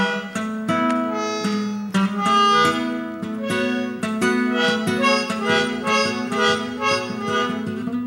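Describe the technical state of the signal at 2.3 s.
At 2.3 s the music plays through intact, with no audible technical fault at that moment.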